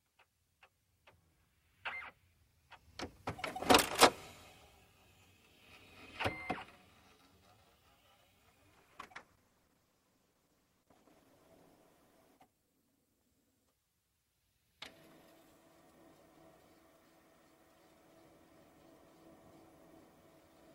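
From 8.75 s to 16.01 s there is a call bitrate drop. The encoder was forced to spend far fewer bits, and the sound turns coarse, watery and muffled as the highs fall away. This fits a fall from 48 to 13 kbps, bottoming out for about 2.45 s.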